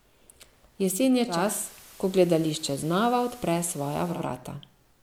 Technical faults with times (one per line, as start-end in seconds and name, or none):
1.24-4.27 digital radio blending to analogue